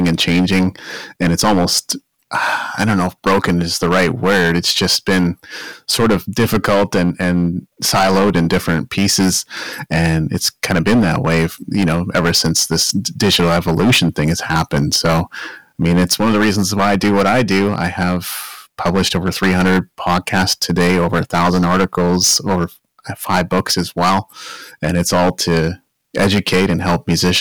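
Hard clipping runs through the whole speech clip. The signal is driven about 15 dB past what the stage can carry, so around a tenth of the samples are sheared flat at the stage's limit, spraying high harmonics that give every louder syllable a harsh, gritty fuzz.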